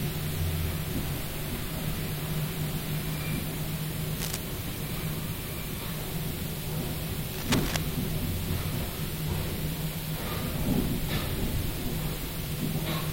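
Running through the whole audio is low bit depth with noise shaping: the signal is quantised to about 6 bits, with the rounding error pushed upward in frequency, leaving a steady, thin hiss that climbs toward the top of the band and sits nearly as loud as the sound itself. Two bursts of dense, uneven scratching cut across the sound, from 4.17 to 4.37 s and from 7.33 to 7.76 s, the second at roughly the level of the signal. This is cable scratch noise, most likely a worn cable, connector or control being moved so its contact resistance jumps about rapidly. From 9.25 to 9.37 s there is a brief smeared, noisy patch typical of AAC frame loss with concealment: the decoder rebuilds the gap from the last good spectrum, and the roughly 43 ms hole fits a single lost frame.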